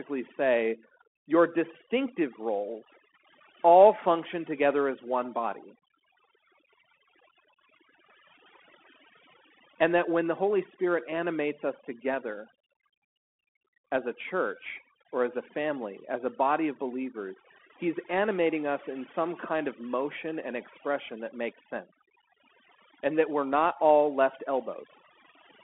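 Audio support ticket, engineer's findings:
Whole clip: background pulled down and broken into twinkling, warbling specks, with quiet parts of the speech dropping out with it. Overdone noise removal; bands near the noise estimate are cut far down or off.

Whole clip: speech confined to roughly 200 Hz to 3.4 kHz, nothing above 3.8 kHz, with scratchy s sounds and granular hiss under the speech. Bluetooth CVSD headset codec, which fits a 64 kbit/s link. Loud high content outruns the adaptive one-bit step and distorts.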